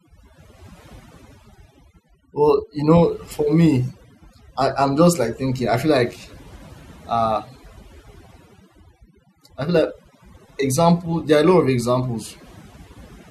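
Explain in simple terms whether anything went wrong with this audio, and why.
The whole clip suffers from overdone noise removal: the cleanup was cranked too high, so the background drops and breaks up into twinkly specks.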